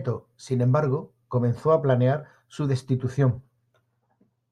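A short recording of speech, with nothing technically wrong to be heard in it. No fault turns up at any point in the recording.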